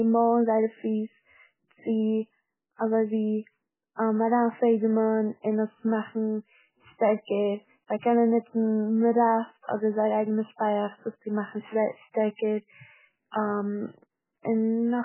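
MP3 compression marks the speech across the whole clip, from start to finish. The damage is heavy, which fits an encoder likely starved to something around 8 kbps. With so few bits, weak frequency lines are dropped. Those lines flicker in and out between frames, so the speech sounds watery and swirling, with metallic chirps on s sounds and smeared onsets.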